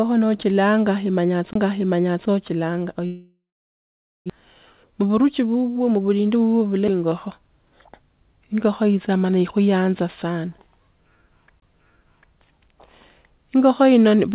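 At 1.53 to 1.55 s a CD skip causes a brief tick and a mute of about 20 ms, after which the speech resumes from a different point, as if the pickup had jumped a whole turn of the disc's spiral.

From 3.06 to 4.32 s the sound carries on as a fading buzz, then drops to silence for about 0.85 s. Roughly a second of speech never returns. This is likely a long network dropout, with the receiver stretching the last audio before giving up.

From 4.40 to 6.36 s a jitter buffer speed-up plays the speech at 110% with unchanged pitch, so it sounds hurried. Short pitch-period slices, around 0.2 s in total, are removed to work off the delay built up by the dropout.

A second CD skip at 6.88 s leaves a tick and a mute of about 7 ms with a jump in position. A third, right after "ikuyaanza sana" at 11.60 to 11.62 s, mutes for about 20 ms before the speech continues from elsewhere. All of this passes through a G.711 call path with nothing above 4 kHz.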